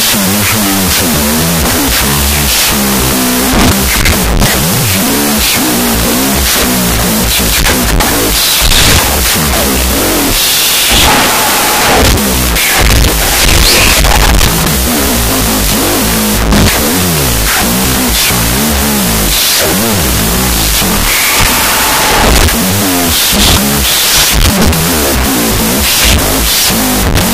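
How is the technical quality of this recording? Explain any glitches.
Poor, because a wrong sample width runs the whole way through. Data written as 16-bit integers is being read as unsigned 8-bit. Each byte becomes its own sample, so much is garbage. Loud noise buries the original, playing at half speed, an octave low.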